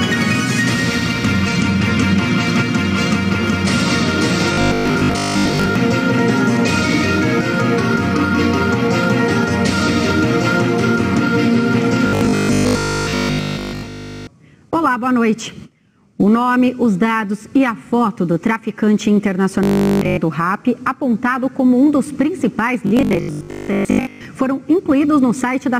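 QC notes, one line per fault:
4.54–5.76 s, 12.07–14.27 s, 19.63–20.17 s, 22.87–24.25 s: robotic sound from repeated short buffers, a rigid 50 Hz buzz, likely a 20 ms slice looping over missing audio. It shows as stacked 50 Hz-spaced spectrogram stripes and identical 20 ms waveform cycles, fully looped in the middle two spans and mostly looped in the first and last.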